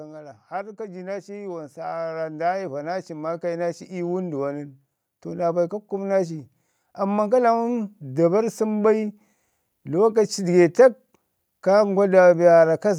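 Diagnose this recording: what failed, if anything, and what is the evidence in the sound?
From 0.48 s to 8.32 s the whole recording slowly swells: the speech and the room noise behind it grow louder together, by about 16 dB overall, with no jump at any single point. That joint, gradual climb is automatic gain rising in the call-processing stage. The automatic gain control judged the input too quiet and kept raising its gain over nearly eight seconds. Because it scales everything, the background lifts right along with the speech.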